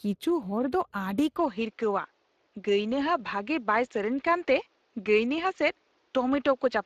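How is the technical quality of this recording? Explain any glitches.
Technical quality is compromised by two faults.

Speex codec damage runs through the whole speech recording. This CELP codec has a limited budget for coding the excitation, so the voice sounds plainly hoarse and grainy. The top end stops at 15.3 kHz, and the spectrum fits a mid-rate setting of roughly 22 kbps.

From 1.37 s to the end the sound turns duller with no gap, as the band above 7.5 kHz disappears. This is likely an input switched to a poorer device. A faint new noise floor appears roughly 40 dB down, and the level stays about the same.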